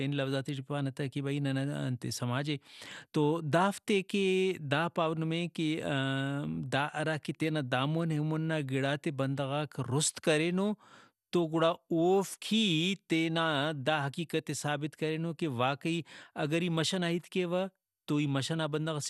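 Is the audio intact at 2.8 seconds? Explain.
No. At 2.8 seconds, as throughout the speech, the audio was likely squeezed through MP2 compression at a low bitrate, around 80 kbps by the sound. With too few bits, the upper sub-bands drop out above about 12.1 kHz and the remaining bands are coarsely quantised, giving a dull, gurgling, granular quality.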